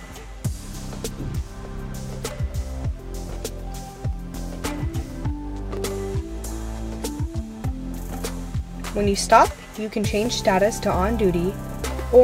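Five sharp, isolated clicks break the audio, at 1.36, 4.13, 5.77, 8.60 and 10.26 seconds. Each is a single snap with nothing audibly missing around it. Each shows as a thin vertical line through the spectrum. The likely cause is dropped samples, where well under a millisecond of the stream goes missing. The waveform then jumps straight from one value to a later one. That sudden step, not any lost sound, is what produces each click.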